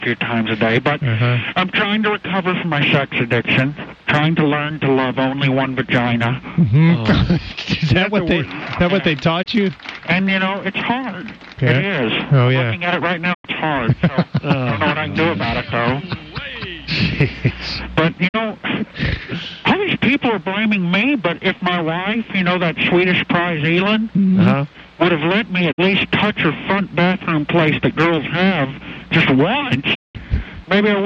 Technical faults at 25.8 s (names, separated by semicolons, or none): digital broadcast dropout